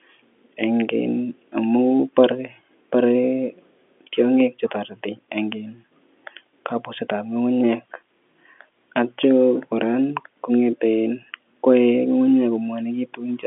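There are no technical faults to describe in this speech, which carries the narrow band of an ordinary G.711 telephone line with nothing above about 3.8 kHz.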